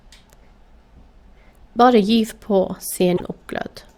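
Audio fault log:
3.16–3.21 s, broken MP3 bit reservoir: the speech jumps forward and about 50 ms comes out as a chirp, a burst of noise or a short hole instead of clean sound. The likely cause is missing frames, so the next frames fetch their borrowed data from the wrong bytes. The span covers roughly two frames, which fits 24 ms frames. On a spectrogram it appears as a brief disruption breaking the harmonics; the waveform shows a discontinuity.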